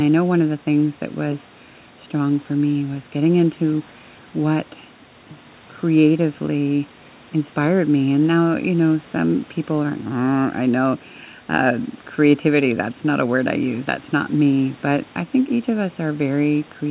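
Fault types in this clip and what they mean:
No faults found in this speech clip; the band stops at 4 kHz, as expected from the G.711 mu-law call path, and the room noise sits about 30 dB below the speech.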